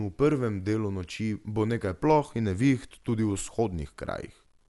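A speech recording that was likely reduced to a very short word length by truncation without dither, in a way that fits 10 bits, so its rounding error tracks the signal rather than sitting underneath it as a steady hiss. Throughout, that error sits roughly 45 dB below the speech and is heard as a grainy, gritty distortion that shifts with the voice, rougher on soft syllables and decaying tails, where the sound steps coarsely instead of fading smoothly. The same audio also likely passed through Dolby Digital compression at a low bitrate, consistent with about 64 kbps. Here the encoder cut the band so nothing remains above 11.4 kHz, leaving the speech dull and lacking air. It also starved many frequency lines of bits, and the decoder's noise fill produces a plainly audible rough, fluttering texture around the voiced parts for the full length of the clip.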